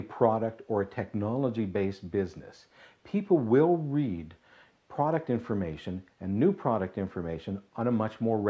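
The signal stays steady throughout, with no audible technical faults at any point in the recording.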